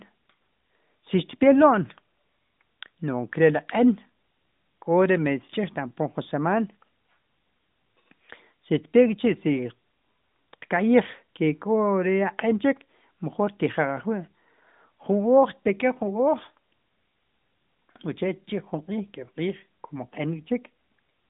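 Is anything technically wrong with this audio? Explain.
No, nothing technically wrong.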